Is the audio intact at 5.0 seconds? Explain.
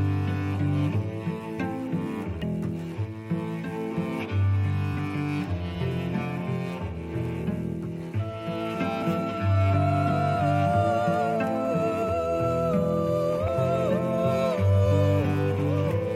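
No. Damaged data in the compressed stream hits at about 4.97 s, just before the 5.0-second mark. Bytes of the encoded stream there are corrupt, so the decoder misreads the affected frame, loses its place in the bitstream and hunts for the next valid frame header before decoding resumes. The result is a very short burst, under 20 ms, of garbled output, heard as a sharp chirp or blip in the sound.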